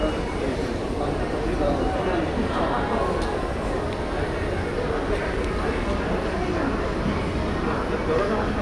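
Nothing technically wrong turns up in this short recording of sounds; there's no fault to point to anywhere in it.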